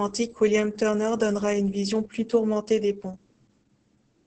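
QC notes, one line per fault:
Throughout: Opus voice compression, heavy damage. The speech sounds muffled, hoarse and slightly robotic, with nothing above 8.7 kHz. That points to the SILK coder in wideband mode at a very low rate, around 10 kbps, where the excitation is coded coarsely in each 20 ms frame.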